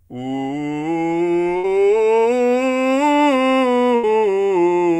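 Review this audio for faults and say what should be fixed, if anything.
Burst of packet loss at 1.57–1.65 s and 3.95–4.05 s: the receiver stretched the last music for about 60 and 80 ms, fading it out, then resumed with similar stretches missing. Spectrograms show frozen, dimming bands ending in an abrupt jump. Adding jitter buffering and forward error correction would help prevent this.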